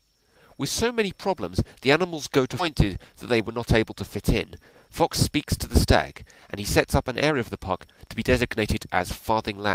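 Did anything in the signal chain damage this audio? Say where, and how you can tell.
Yes. At 2.59 to 2.61 s the audio jumps forward with no gap: what comes before and after the cut are joined almost directly, and about one and a half seconds of material is simply never heard. This is a skip ahead at the network and jitter-buffer stage. A run of audio was lost in transit, or discarded when the buffer overflowed, while later audio was already queued, so playback resumed from that later point.

From 2.76 s to the end at 9.74 s the audio runs hurried, at 112% speed, while the pitch stays where it was. That points to a jitter buffer speed-up. The receiver's buffer was holding more audio than its target, for example after delayed packets arrived in a burst, so it repeatedly cut short slices of one or a few pitch periods. Across that stretch the cuts add up to around 0.7 s taken out.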